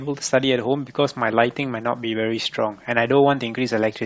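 A short speech clip carrying plainly audible Bluetooth LC3 compression throughout: consonants and breath noise take on a grainy, hissy edge, and the upper harmonics sound rough rather than clean, which is likely the work of LE Audio's LC3 codec running at a low rate, consistent with about 32 kbps. On a spectrogram the upper band looks patchy and speckled, with detail above a few kHz replaced by uniform noise-like texture instead of clear harmonic lines. At 2.41 s there is a single lost LE Audio frame, a blip lasting about 10 ms, where the decoder repeats the previous spectrum with scrambled phase, so the sound briefly smears into a noisy flutter rather than dropping out. On the spectrogram this shows as one narrow vertical strip of diffuse energy interrupting the harmonic structure, and on the waveform as a short stretch of irregular, noise-like cycles.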